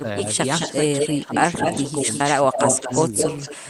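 An echo canceller on the far end was likely letting part of its loudspeaker pickup escape back down the line. The result is an echo leak: a delayed second copy of the speech trails the original from 0.0 to 0.77 s at about 209 ms, and again from 0.98 s to the end at about 217 ms. The copy sits only a few decibels below the direct speech.

Between 1.23 and 1.31 s, both ends were active at once, and the canceller likely could not tell the local talker from the returning echo, so it attenuated everything. This is speech suppressed in double talk. The speech dips briefly, by a few decibels at the deepest point, for less than a tenth of a second before recovering.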